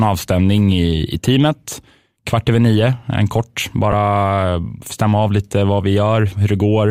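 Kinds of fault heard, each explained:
Chunks out of order: at 3.92 s a 5.33 ms chunk of speech plays one chunk late, swapped with the piece that should follow it. Nothing is lost, but its three hard joins appear as abrupt waveform steps and vertical lines on a spectrogram.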